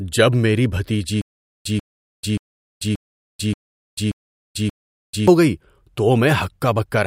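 Stutter with silent gaps runs from 1.22 to 5.28 s in this speech recording. A 141 ms fragment repeats seven times, once every 580 ms, with 439 ms of digital silence between repeats. The likely cause is a stalled stream replaying its last fragment at each retry, so the audio meant for that span is lost.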